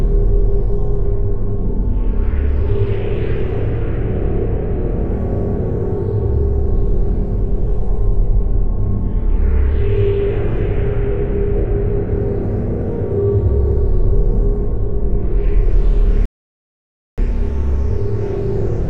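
At 16.26 s a rebuffering stall drops the sound into silence for about 0.92 s. Playback then resumes exactly where it stopped, with nothing skipped, unlike a dropout.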